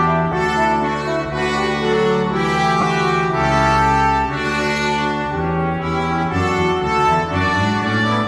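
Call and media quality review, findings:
Lost LE Audio frames at 0.32 s (one 10 ms frame) and 2.81 to 2.83 s (two frames, 20 ms). Brief noisy smear where tonal content briefly loses definition. Component: Bluetooth LE Audio link, LC3 decoder concealment. Mechanism: missing frames filled by repeating the previous spectrum with randomised signs; gaps too short to reach the fade-out stage. Light lossy compression, slight damage, codec not identifiable.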